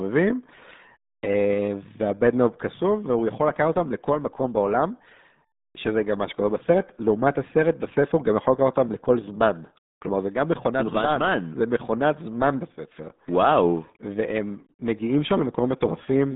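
From start to finish the speech carries the RealAudio 14.4 codec sound: band squeezed to roughly 150 Hz to 3.7 kHz, nothing above 3.8 kHz, and a heavy gargly, muffled smear. That's what an 8 kbit/s dial-up speech coder does when it throws away that much.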